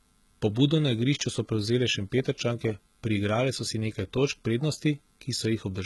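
All the way through, the treble on this speech sounds synthetic, with s sounds gone gritty and lispy and nothing above 11.8 kHz. That's likely HE-AAC compression: the top end is rebuilt from copied lower bands, and heavy damage like this fits roughly 16 kbps.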